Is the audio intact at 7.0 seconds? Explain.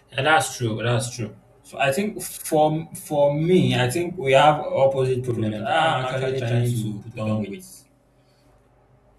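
No, at 7.0 seconds you're in the middle of a channel delay doubling that runs from 5.31 to 8.43 s. One channel lags by about 93 ms, which fits a 4096-sample buffer, and once it's summed to mono the speech comes back as a distinct slapback copy at the same level.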